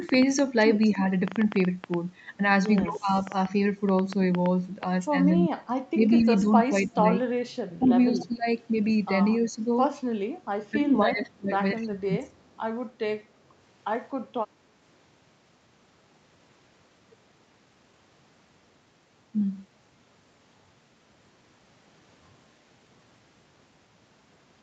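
A speech recording with three kinds of fault. Interference from nearby equipment or a faulty connection or power supply is the likely cause of a train of clicks from 0.09 to 4.84 s: around thirty irregular pops, about six per second, peaking roughly 10 dB above the speech. When both sides talked at once, the echo canceller likely turned the near talker down, causing speech suppressed in double talk at 0.95–0.99, 2.82–3.10, 5.49–8.47, 9.39–9.62 and 10.71–12.34 s, with the voice dipping by up to about 20 dB. Incomplete echo cancellation on a loudspeaker side likely produces echo leak at 7.81–8.55, 10.42–10.46 and 12.39–12.60 s: a faint copy of the voice 249 ms late, about 20 to 40 dB below the speech.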